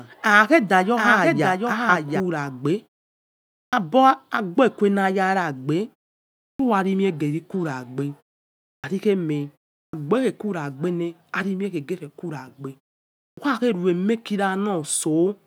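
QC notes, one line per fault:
3.68, 6.54, 8.79, 9.88 and 13.32 s, clipped start after a pause: after silences of 0.39 to 0.88 s, the output wakes late and swallows the first 47 to 54 ms of speech. Unlike muted pauses, which only drop the background, onsets here are actually lost.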